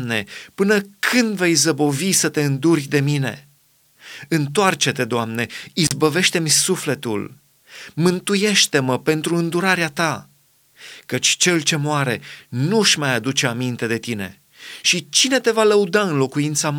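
At 5.85 to 5.93 s the speech breaks up with an intermittent contact: a loose plug or cable briefly opens the signal path, cutting the sound for about 37 ms. Unlike a clean digital dropout, the gap is framed by scratchy crackle as the connection opens and closes.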